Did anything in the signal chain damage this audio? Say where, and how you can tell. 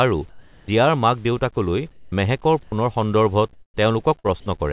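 Yes. Several stages left audible damage, mostly in call processing at the sender, with one network event near the end.

Sound dropped by the voice detector, at 0.29–0.68 s (ending just before "মাক দেউতাকলৈ"), 2.63–2.72 s and 4.40–4.46 s. In each span, speech gives way to a flat, steady hiss and returns when the detector fires again. The first gap replaces 390 ms and loses about 180 ms of real sound, the second loses 70 ms of 90 ms, and the third 30 ms of 60 ms. The likely cause is a call-side voice detector misjudging part of the sound as background and halting transmission, with RFC 3389 comfort noise filling in.

Comfort noise in place of the background, at 1.91–2.12 s, right after "মাক দেউতাকলৈ", and 3.53–3.77 s. Here the natural room tone, sitting about 30 dB below the loud passages, turns into a smooth, detail-free noise. It is noticeably quieter, down about 15 dB in the first pause and about 12 dB in the second. 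That is likely discontinuous transmission in call processing: the sender went silent and the receiver synthesised noise from a coarse spectral description.

Onset clipped by the voice detector, at 2.10–2.12 s, as speech resumes after the first comfort-noise pause. The word starts abruptly, missing roughly 20 ms of its soft beginning, so the attack sounds chopped rather than rising naturally. The likely cause is the sender's detector reacting late to the restart, so those first milliseconds were never sent and the comfort noise ran on over them.

Burst of packet loss, at 4.19–4.27 s. This is a network and jitter-buffer fault: packets failed to arrive in time. The receiver's concealment extends the last sound for about 51 ms, fading it so it reads as a brief held buzz or dying hiss. Playback then jumps ahead with about 60 ms of the original simply absent. All of this rides on G.711 A-law audio with nothing above 4 kHz.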